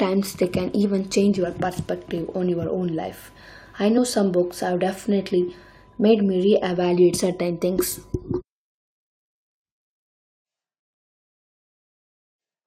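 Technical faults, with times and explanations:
3.97 s, damaged data in a compressed stream: a brief glitch right before "some books have definitely". Corrupted bytes there made the decoder misread the frame, lose sync and jump ahead to the next valid frame header.
10.11 s to the end, switch to a distant microphone: the speech abruptly turns hollow and roomy, thinner in the bass, about 5 dB quieter, with background noise only about 25 dB below it. Likely the close microphone dropped out, leaving a farther pickup recording the room.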